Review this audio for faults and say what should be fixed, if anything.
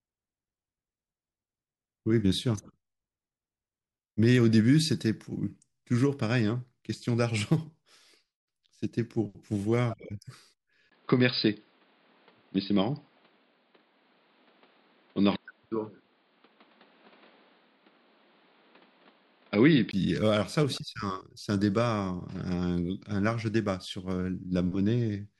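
From 10.9 s to 19.9 s the speech turns dull and band-limited, with nothing above 5 kHz. A 20 ms gap marks the switch, and a new background noise sits roughly 35 dB below the speech at about the same level. The likely cause is the input switched to a poorer device, with full bandwidth returning at 19.9 s. Lock the recording input to a single device and disable automatic device or headset profile switching during capture.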